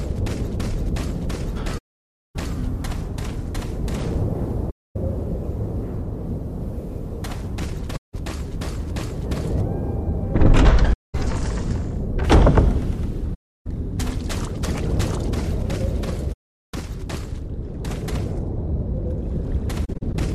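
AAC frame loss with muting occurs at 1.77 to 2.36 s, 4.70 to 4.96 s, 7.96 to 8.14 s, 10.93 to 11.15 s, 13.34 to 13.67 s and 16.33 to 16.74 s. From 19.85 to 20.15 s it appears as scattered brief gaps, the longest around 40 ms. The decoder zeroed the missing frames, so the overlapping windows fade the sound out and back in, leaving soft-edged holes.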